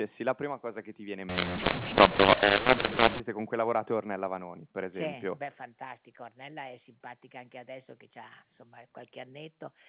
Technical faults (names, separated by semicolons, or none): mu-law and A-law mixed up